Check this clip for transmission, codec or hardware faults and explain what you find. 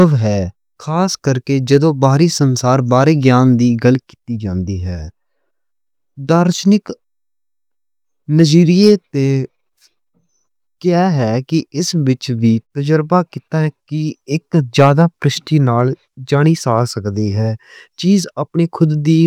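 Two brief bursts of hard clipping occur in the speech, at 15.79 s and from 16.72 to 16.79 s. Peaks reached the stage's ceiling, with about 0 dB overdrive, and were cut flat. This added upper harmonics heard as a short crackle.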